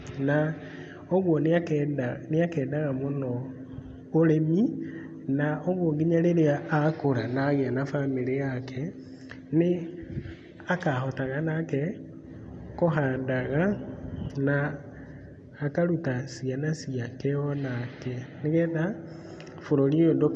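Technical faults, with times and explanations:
No technical faults detected.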